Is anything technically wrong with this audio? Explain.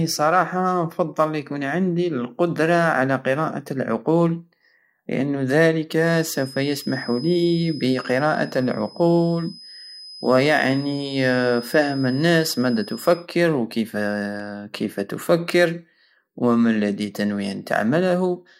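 Yes, there are two faults in this speech clip.

From 5.95 to 13.28 s, a thin, steady whistle at 5.1 kHz sits about 20 dB below the speech and swells and fades slowly in level. This is a feedback whistle. The likely cause is a loudspeaker-to-microphone loop held right at the edge of feedback, so a single high frequency keeps ringing at a low level without building into a full howl.

At 14.40 s, just before "وكيف تفكر ومالدي تنوي", there is a sharp tick. This is a block of digital silence lasting about 0.67 ms, which fits a 32-sample block of zeros. The waveform drops out abruptly and jumps back with no fade, and those hard edges produce the click. The gap is too short to hear as a hole.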